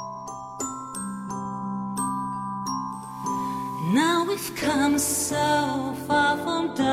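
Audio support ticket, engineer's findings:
Digital radio blending to analogue, 2.84–5.94 s. Receiver lost digital, cross-faded over 456 ms to FM simulcast, later back. Spectrogram: hiss floor roughly 30 dB under signal. Waveform: level step of about 3 dB.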